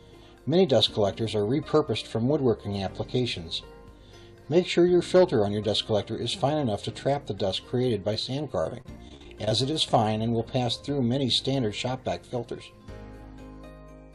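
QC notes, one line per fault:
8.62–9.52 s, repeated packet loss (robotic sound): a quick run of short dropouts, longest about 37 ms, each patched by stretching the last bit of sound, so it turns choppy with pieces missing.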